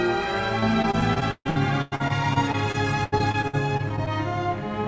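From 0.60 s to 4.1 s, packets were lost or arrived late again and again, so the sound suffers repeated packet loss, which gives it a robotic quality. About two dozen holes open up, the longest 139 ms, and each is patched by stretching the last good sound before the next hole arrives. Roughly a fifth of the stretch is filled this way, so it turns choppy, with pieces missing. Throughout, nothing is heard above 8 kHz, which fits a G.722 call codec.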